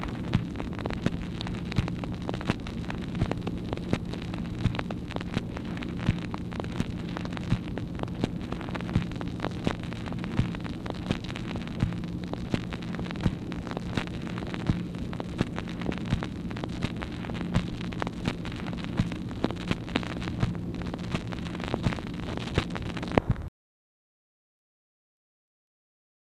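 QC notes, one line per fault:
13.24–13.27 s, loud pop: a single sharp thump rising about 10 dB above the sound, which keeps playing underneath without a gap. It is likely a voltage pulse from a switch, plug or static discharge, not a dropout, since nothing goes missing.
14.42–14.54 s, DAB burbling: a brief patch of burbling over the sound, eight frames long, caused by bit errors slipping past error correction into the audio data so sub-bands get short blips of noise. Its scattered frequency-band warbling tells it apart from a broadband pop.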